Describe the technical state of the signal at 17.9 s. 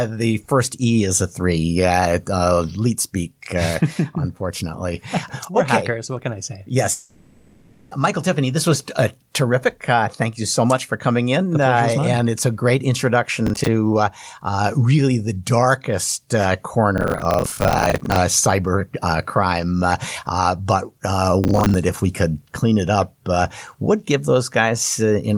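At 17.9 s the speech carries a burst of gritty, tearing crackle, part of processor overload crackle running from 16.98 to 18.16 s. The processor kept missing its buffer deadlines across that stretch, dozens of times, and each miss let a short piece of old audio replay with hard edges in place of fresh sound. The spacing of the crackle fits buffers of around 10 ms, and it stops once the load passes.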